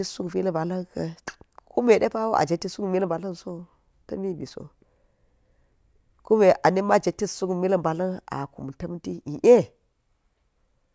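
Nothing stood out on listening to this recording.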